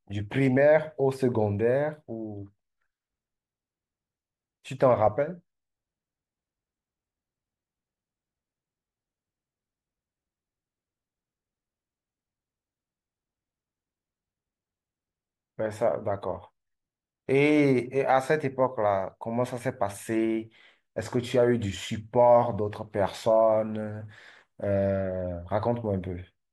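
No technical faults can be heard anywhere in the recording.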